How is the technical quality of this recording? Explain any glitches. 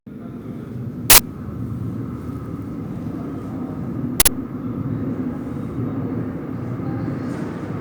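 The recording has two glitches from an uninitialised buffer, at 1.1 s and 4.2 s. Each time, an 80 ms block played out before any audio was written into it, so leftover memory came through as a short, harsh burst of loud digital noise.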